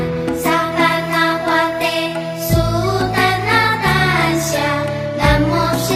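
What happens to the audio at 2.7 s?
USB whine runs from 0.72 to 3.58 s: 1 ms USB frame current leaking through power or ground, a steady 1 kHz tone well below the signal, a flat horizontal spectrogram line.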